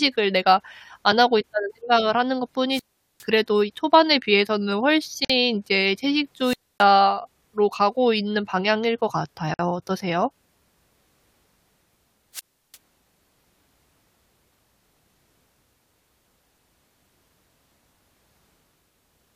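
A speech recording with two kinds of interruption. Three times a brief rise of hiss and static comes up, then the sound drops into near silence before the speech returns: from 2.70 to 3.25 s with a hole of about 0.41 s, from 6.40 to 6.90 s with about 0.27 s, and from 12.33 to 12.77 s with about 0.35 s. This is wireless microphone squelch dropout. The analogue FM radio link faded, and once the carrier fell too low the receiver's squelch muted its output until the signal recovered. Separately, the speech cuts out abruptly for about 50 ms at 5.25 s and about 51 ms at 9.54 s. Both holes have edges smeared by the codec, and the sound resumes exactly where it stopped. These are gaps at a join of encoded pieces. The audio was encoded in separate sections and spliced without trimming, so each section's encoder start-up delay and final-frame padding remained as silence at the joins.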